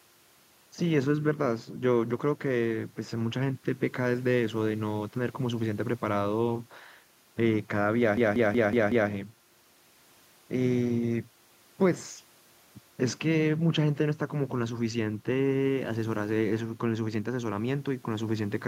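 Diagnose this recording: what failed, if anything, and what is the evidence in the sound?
A system hang loop at the driver or buffer stage. From 8.17 to 9.10 s, one 186 ms slice of speech repeats five times, a stutter at 5.38 Hz. That fits an 8192-sample ring buffer replaying while the driver froze. The waveform shows identical tiled blocks, and the spectrogram shows one pattern stamped repeatedly.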